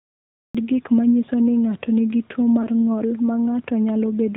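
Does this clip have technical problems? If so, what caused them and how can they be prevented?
Yes. Throughout, the speech passes through an AMR narrowband mobile codec. Nothing above 4 kHz survives, and the pulse-driven vocal tract model gives the voice a plainly audible buzzy, synthetic edge, which fits a mid-rate mode of about 10.2 kbps. Prevention: use a wideband codec or a higher-rate path.

There is a cut-off start. The clip is digital silence from 0 to 0.55 s, then the sound enters abruptly at 0.55 s, just before "gik ma nyiso", with no natural attack. Recording or streaming began mid-sound. Prevention: start capture before the talker begins.

Lost AMR speech frames occur from 2.62 to 2.67 s, just before "ng’ol ma". There is a brief dip or warble where the decoder repeated the previous pitch and vocal tract settings at reduced gain, which fits a single lost 20 ms frame. Prevention: improve radio link quality or add error protection.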